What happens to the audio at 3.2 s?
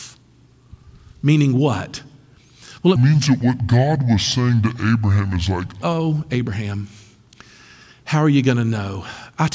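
Wrong sample rate from 2.96 to 5.82 s: playback at two-thirds speed, fitting 24 kHz audio run at 16 kHz, sounds slow and seven semitones low. The spectrogram's harmonics sink and stretch.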